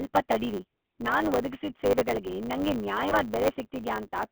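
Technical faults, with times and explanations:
Throughout: GSM full-rate codec. The speech has gone through the old GSM full-rate coder, which models the vocal tract and drives it with a sparse, regularly spaced pulse excitation, keeping just a third of the excitation samples. That's where the buzzy, gravelly roughness comes from, and it's plainly audible here. The band is phone-narrow too, roughly 200 Hz to 3.4 kHz, so there's no air up top. The rate you'd expect from this coder is 13 kbps.
Throughout: block size mismatch (truncated). There's a steady 100 Hz buzz riding under everything, and the speech runs about 1.07 times fast while the timbre stays where it should. One stage is handing over longer blocks than the next one reads, so the tail of every block gets dropped. Each chop repeats at the block rate, which gives you the buzz, and losing those samples is what hurries the timing along. 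That fits 512-sample blocks being written.
3.09 to 3.14 s: lost GSM frames. Right after "ನಾನ್ ಒದಗಿಸಿದ್ ಸೇವೆಗಳ್ಗೆ ನಂಗೆ" there's a short rough, metallic ring lasting about 20 ms. One GSM frame went bad, and the decoder covered it by reusing the last good frame's settings. So what you hear is the previous sound held and smeared for a moment instead of a clean gap. It's only a single frame's worth, so it never fades all the way to silence.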